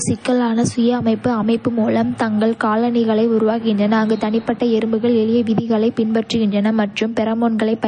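From start to finish the speech carries plainly audible coding damage, likely from MP3 compression at a low bitrate, which fits roughly 34 kbps. Everything above 9.4 kHz is gone, so the treble sounds dull, and sibilants turn swirly and watery as weak frequency lines drop in and out between frames. A spectrogram shows a flat ceiling at 9.4 kHz with speckled, gappy energy beneath it, and the waveform shows onsets smeared.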